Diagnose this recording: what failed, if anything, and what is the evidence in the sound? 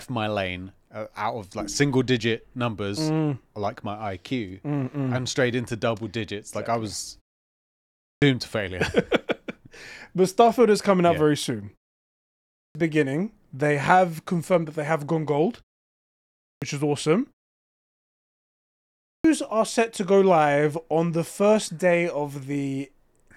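Clipped start after a pause at the playback device: after "I was" (7.61 s), and at 12.1, 15.97 and 18.63 s, about 0.6 s of speech vanishes as the sleeping output wakes. Unlike muted pauses, the speech itself is lost, not just the background.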